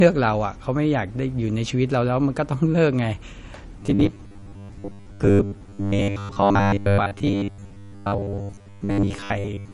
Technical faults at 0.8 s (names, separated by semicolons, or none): MP3 compression